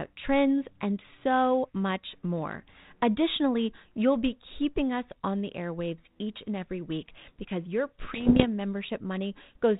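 From 8.0 to 8.45 s the speech breaks into a cluster of pops and rough, gritty bursts with brief jumps in level. These are bit errors on an ADPCM link, at a rate of roughly one bit in a hundred. Each flipped bit throws off the decoder's step size and predictor, so the damage rings on for a few milliseconds instead of clicking once. Packet loss would leave gaps or muted stretches. Here the signal keeps flowing but turns harsh, unlike the light coding damage of the 32 kbit/s G.726 coding.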